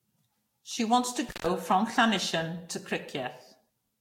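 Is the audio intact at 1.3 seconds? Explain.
No. Right after "wants to", an intermittent contact cuts the sound from 1.29 to 1.46 s. The line stays open for about 136 ms, as if a loose plug briefly lost connection. Crackle marks both edges and faint hiss persists through the gap, unlike a clean digital dropout, which falls to silence.

The same moment also carries generation loss. The audio sounds swirly, smeared and hollow, with blurred attacks and nothing above 16.7 kHz. That is more damage than one encode at a bitrate near 64 kbit/s would leave, so the likely cause is several lossy re-encodes stacking their errors.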